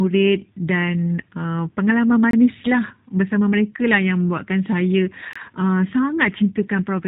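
G.729 codec damage runs through the whole clip. The speech is rebuilt from a vocal tract filter, a pitch predictor and a few pulses per 10 ms frame rather than carried as a waveform, so it sounds rough and slightly synthetic, and the damage is plainly audible. Nothing above 3.8 kHz survives, which dulls sibilants and fits an 8 kbit/s low-rate VoIP coder.

A gap between chunks opens from 2.31 to 2.33 s and again from 5.33 to 5.36 s. Each is a hole of about 23 ms with hard edges, and they fall about 3 s apart. That spacing fits audio handled in 3-second chunks with silence left at each join, so the speech stops abruptly and resumes with nothing lost, only interrupted.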